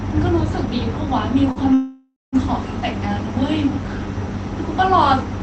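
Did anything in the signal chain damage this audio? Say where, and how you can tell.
Yes, in the network and jitter-buffer stage. From 1.51 to 1.59 s there is a short stall from a late packet. About 43 ms of the last sound is stretched, then playback resumes with nothing lost. On a spectrogram the final frame smears flat sideways with a faint buzzy band.

From 1.74 to 2.36 s there is a call audio freeze. The sound holds, decays into a fading buzz, goes fully silent for about 170 ms, then continues where it stopped. The waveform shows a tapering envelope, a flat line, then normal audio returning. The likely cause is packets delayed in transit, draining the jitter buffer so the receiver had to fill about 588 ms.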